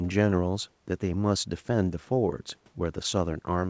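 Nothing goes wrong in this bit of speech; it just has the familiar sound of a call, with the microphone processing and call path leaving nothing above about 8 kHz, the kind of top end you'd expect from a wideband codec like G.722.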